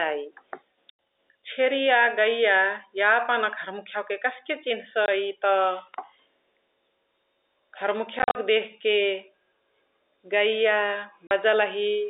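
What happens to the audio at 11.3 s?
The speech drops out abruptly for about 40 ms, from 11.27 to 11.31 s, leaving a dead gap with hard edges where the waveform is cut off and then resumes mid-cycle. This is packet loss filled with silence: a stretch of packets never arrived, and the receiver inserted silence rather than concealing the hole. A 40 ms gap on this telephone-band G.711 line fits four consecutive 10 ms packets going missing.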